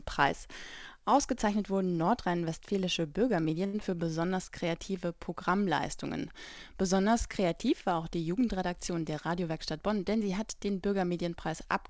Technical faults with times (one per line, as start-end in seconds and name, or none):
3.66-3.75 short stall from a late packet
3.79-3.82 short concealed packet loss
3.91-4.11 jitter buffer slow-down
9.10-10.22 jitter buffer speed-up